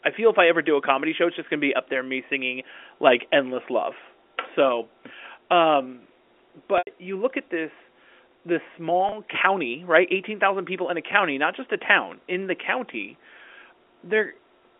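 Telephone speech over a G.711 line, band-limited to about 250 Hz to 3.5 kHz, with two dropouts from packet loss with pitch repetition. At 6.78 to 6.87 s, just before "you look at this", a 90 ms gap is bridged by a repeated, fading pitch period that decays towards silence. At 9.09 to 9.12 s, between "look at this this" and "county right", a 30 ms loss sounds like a brief held buzz.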